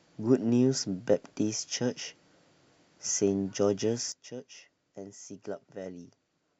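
At 4.12 s the level drops abruptly by about 13 dB and stays down to the end of the speech. Voice and background noise fall together in a single step, with no fade, a sudden gain jump most likely caused by a digital gain change applied without a ramp.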